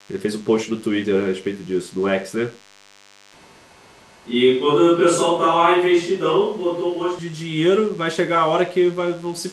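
DECT cordless phone buzz runs throughout: a thin, steady 100 Hz buzz rich in harmonics, about 30 dB below the speech, from rectified radio bursts every 10 ms.

Switch to a distant microphone, from 3.33 to 7.19 s: the speech turns roomy and hollow with thinner bass, at a similar level, and room noise sits around 30 dB below the speech. The close microphone's signal likely dropped out, leaving a farther one, with abrupt changes at both ends.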